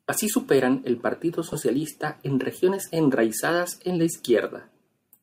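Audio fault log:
1.53 s and 3.39 s (just before "en la"), lost LE Audio frames: each gap lasts about 10 ms, which fits a single dropped frame. The LC3 decoder concealed it by replaying the previous frame's spectrum with randomised signs, so the sound briefly blurs into a short noisy smear rather than a click. On a spectrogram the harmonic lines break into a thin vertical band of diffuse energy. On the waveform the periodic cycles give way to irregular, noise-like samples for one frame. The light lossy coding leaves at most a faint watery texture.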